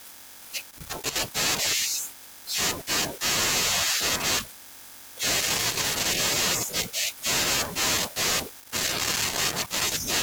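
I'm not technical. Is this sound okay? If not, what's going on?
No. A loose connector crackle: a worn or dirty plug contact keeps cutting in and out, chopping the speech into scratchy bursts at 0.70–1.16 s, 5.41–6.05 s and 8.60–10.05 s.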